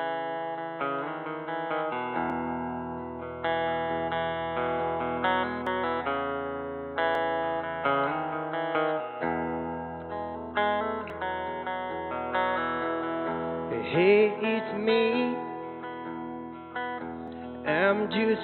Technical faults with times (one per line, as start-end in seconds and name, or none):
2.30 dropped buffer (overrun)
5.67 dropped buffer (overrun)
7.15 dropped buffer (overrun)
11.10 dropped buffer (overrun)
17.28 dropped buffer (overrun)